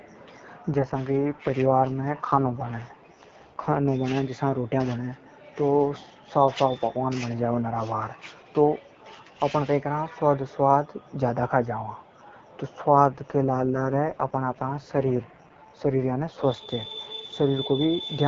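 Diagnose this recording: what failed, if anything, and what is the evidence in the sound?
AMR rate drop at 0.73–3.86 s and 13.06–16.72 s: in the network and codec stage, speech turns raspy with no gap or band change, fitting 12.65 falling to 6.6 kbit/s.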